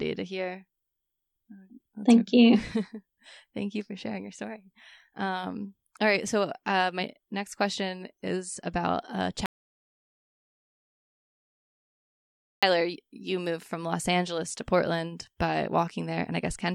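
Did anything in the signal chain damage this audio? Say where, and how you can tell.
Yes. An audio dropout to silence runs from 9.46 s to 12.63 s, about 3.2 s of speech lost between "question is about a" and "you moved from los". The gap is silent with no room tone, which separates it from a gate or fade. That points to the input stage, likely a disconnected device, failed link or mute while the recorder kept writing silence. Speech resumes mid-phrase rather than picking up where it left off, so the missing material is simply gone.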